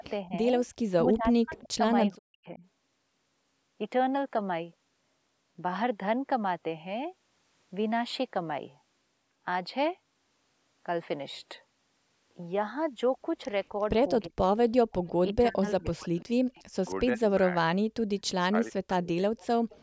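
From 0.0 to 2.62 s the speech drops in and out, with dips of about 40 dB totalling roughly a second. This is likely speech suppressed in double talk, where the echo canceller mutes the near talker while the far side speaks. A spectrogram shows the speech bands blanking out in patches, and the waveform collapses in stretches. The same suppression returns at 14.27 to 14.41 s, 15.05 to 17.47 s and 18.5 to 19.18 s. At 1.57 s, 18.24 s and 19.38 to 19.82 s an echo leak appears, a faint copy of earlier speech 354 ms late and about 30 to 35 dB down. It shows as a weak ghost of the earlier spectral pattern, probably from loudspeaker pickup the canceller missed.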